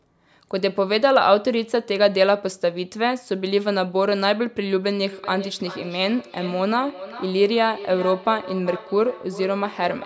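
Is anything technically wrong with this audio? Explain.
Yes. Feedback echo between two devices runs from 5.04 s to the end. A second device on the call replays this microphone's sound, which the microphone picks up again beyond its echo canceller's reach, so the speech returns roughly every 0.4 s, thinner and ringing, peaking about 15 dB below the speech.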